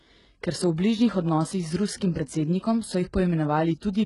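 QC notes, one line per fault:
Throughout: HE-AAC compression is the likely cause. Nothing above 11.1 kHz. Rebuilt treble makes s sounds gritty and metallic, fitting a very low 12 kbps.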